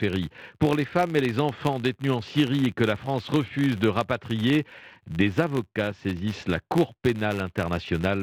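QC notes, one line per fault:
Throughout: filter restarted on every block. The processing filter drops its stored state at each block boundary and begins every block as if from silence. This leaves a small transient at the start of each block. These repeat 100 times a second, which points to blocks 10 ms long, and together they form a steady 100 Hz buzz laid over the speech. The buzz rises and falls with the speech's level and fades when the speech stops.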